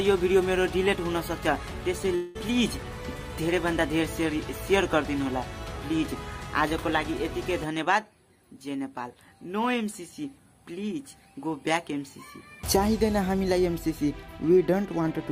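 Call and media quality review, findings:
Long network dropout, 2.15–2.37 s: last sound stretched into a fading buzz or hiss for about 0.2 s, no silence; likely packet loss filled by concealment, longer than single-packet glitches.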